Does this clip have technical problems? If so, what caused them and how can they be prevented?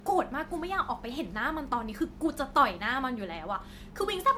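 Yes. The speech has a swirly, smeared, hollow quality all the way through, and consonant attacks sound blurred rather than crisp, with nothing above about 19.9 kHz. That points to generation loss, most likely from the audio being run through MP3 around four times at a bitrate near 98 kbit/s. Each re-encode quantises on a shifted frame grid, so the noise and spectral gaps pile up beyond what one pass would leave. To prevent it, keep a lossless master and encode to MP3 only once, at the final step.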